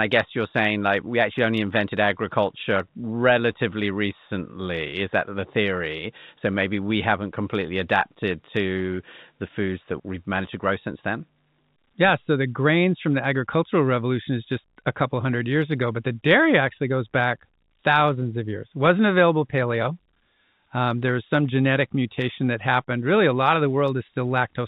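Nothing faulty is audible in this telephone-band speech.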